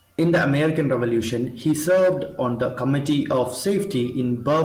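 No technical faults are audible.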